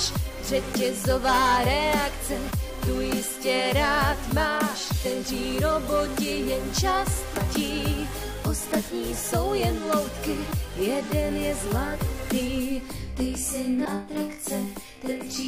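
At 5.04 s, and again from 7.36 to 7.38 s, there is damaged data in the compressed stream. Bytes in the encoded audio are wrong there, so the decoder cannot read those frames properly, loses its place and has to hunt for the next valid frame header before it can resume. Each event comes through as a very short chirp or blip lasting about 20 ms, breaking the flow of the sound before it continues.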